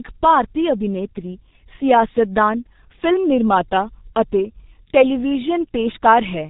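A speech recording runs through the G.723.1 codec from start to finish. The damage is heavy. Nothing reaches above 3.8 kHz, so the top of the spectrum is simply gone. The voice sounds dull and rough. Consonants smear together. The codec codes sound in coarse 30 ms blocks and refreshes its model of the voice only slowly. That leaves a grainy, hoarse texture. The degree of loss fits a rate of about 6 kbit/s.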